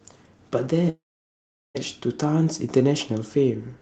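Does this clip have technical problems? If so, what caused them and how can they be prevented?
Yes. From 0.89 to 1.77 s the speech cuts out, which sounds like a long network dropout, likely on a call link. About 0.86 s of audio never arrived. The receiver smeared the last sound into a brief fading buzz for roughly a tenth of a second, then left near-silence for about 0.76 s before the speech resumed with that chunk simply gone. A steadier connection, or more forward error correction and redundancy on the link, would help prevent it.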